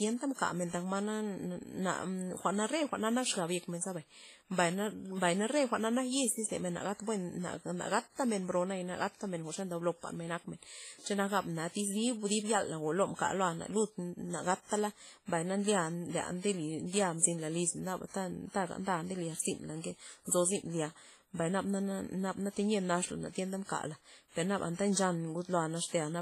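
WMA compression, heard throughout the speech, is the likely cause of a ringing, washy texture with hiss that swells and fades with the signal. Long transform blocks smear quantisation noise, weak detail drops out, and nothing sounds above 15.4 kHz, which fits a bitrate near 24 kbps.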